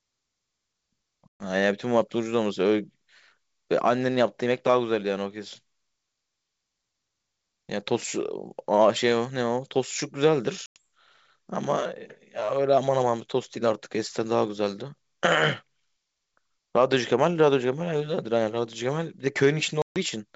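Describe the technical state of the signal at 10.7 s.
At 10.7 s the speech falls into a hard-edged silent hole from about 10.66 to 10.79 s: packet loss on an ADPCM call, around 100 ms of audio, or roughly five packets, on this 64 kbit/s G.722 link. When the sound resumes, the decoder's adaptive predictor and step size no longer match the sender's, so it returns with some distortion that settles within tens of milliseconds. That disturbed recovery sets it apart from a clean dropout.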